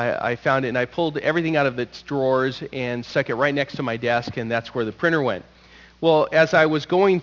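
From start to finish the clip carries aliasing. Content that sat above 6 kHz was folded back below that line instead of being removed, which fits a drop to a 12 kHz sample rate with no anti-alias filter first. The folded energy lands at unrelated, wrong pitches about 25 dB below the signal, giving bright sounds a gritty, metallic edge. On a spectrogram, energy runs hard up to a sharp ceiling at 6 kHz, with mirrored traces moving opposite to the real ones.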